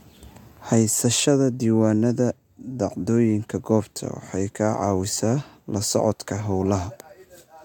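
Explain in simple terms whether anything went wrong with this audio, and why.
Nothing went wrong here: no audible technical fault anywhere in the speech.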